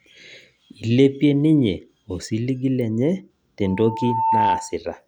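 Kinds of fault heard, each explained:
Loudspeaker feedback squeal: from 3.63 to 4.78 s the microphone re-amplifies its own loudspeaker, and an 893 Hz tone swells within a second above the speech.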